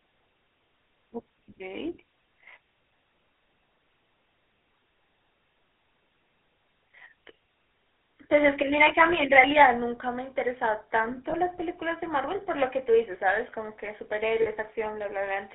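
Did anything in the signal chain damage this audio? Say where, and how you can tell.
Yes. Codec stage: the whole clip carries the buzzy, gravelly roughness of the GSM full-rate codec. Nothing sits outside roughly 300 Hz to 3.5 kHz.

Converter stage: from 9.36 to 9.64 s, peaks turn harsh and crackly. That is likely microphone overload, with tops flattened about 4 dB over full scale.

Call processing: at 9.66 s, voice and background drop together by about 3 dB. This is likely the microphone volume stepped down after that overload.

Network stage: lost GSM frames leave a brief metallic ring at 11.3 s, fitting one 20 ms frame, and 14.42 to 14.48 s, fitting two.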